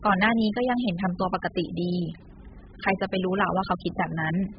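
From start to finish the speech sounds dull and smeared, with nothing above 5 kHz and a warbly, fizzy edge on sibilants. That's likely heavy AAC compression at a very low bitrate, where the encoder drops the top end and leaves holes across the spectrum.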